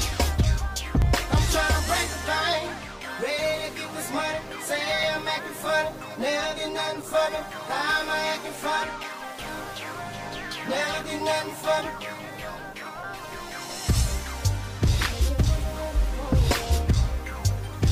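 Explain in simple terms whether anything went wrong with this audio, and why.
Something did go wrong: the audio has periodic USB or driver dropouts. Every 2 seconds, from about 1.0 s through about 17.0 s, a tiny slice of sound, only a few milliseconds, goes missing and is replaced by silence. Each gap is heard as a short tick or pop. The cause is something on the computer briefly blocking the USB connection or audio driver on a fixed schedule, so the audio stream stalls at the same interval each time.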